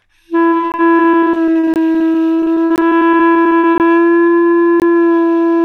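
From 0.49 to 3.93 s, repeated packet loss chops the sound. Dozens of holes, the longest about 54 ms, are patched by stretching the last sound, giving a robotic texture.

Gaps between chunks also appear at 0.72, 1.74, 2.76, 3.78 and 4.80 s. Each 20 ms silence falls at a 1.0 s chunk join, and nothing is lost.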